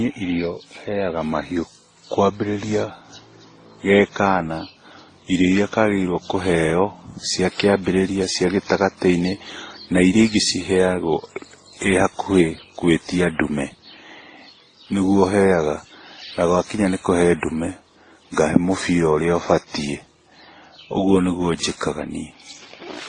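Transcoding between lossy codecs runs throughout the speech. Nothing sounds above about 9.8 kHz, and the artefacts of the different codecs sit together. That mix likely comes from a chain of low-bitrate encoders, one that points to WMA followed by MP3 and then Opus. Each later stage spent its few bits re-encoding the previous stage's damage and added its own, while the lowest band limit carried through.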